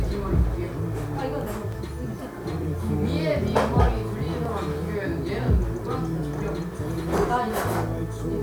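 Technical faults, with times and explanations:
Throughout: low bit depth without dither. Grainy distortion follows the sound about 30 dB down, likely from 8-bit rounding.
0.36 to 7.18 s: clock drift buffer slips. Clicks recur steadily every 1.36 s, which fits a clock mismatch of roughly 0.1% likely dropping or repeating about 70 samples each time, unlike random dropouts.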